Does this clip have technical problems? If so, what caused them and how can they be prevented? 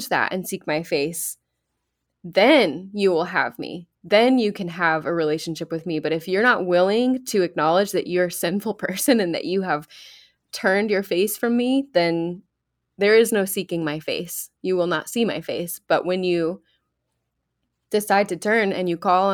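No, nothing in this speech recording stood out as a technical problem on listening, so there is no cause to trace and nothing to prevent.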